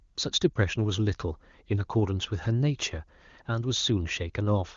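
A lost AMR speech frame at 0.54 to 0.58 s in this speech clip causes a brief dip or warble. The decoder filled about 20 ms by reusing the last good pitch and vocal tract settings at reduced gain, and the voice comes back weak or rough for a moment. The AMR-WB coding sounds clean, which fits its top rate.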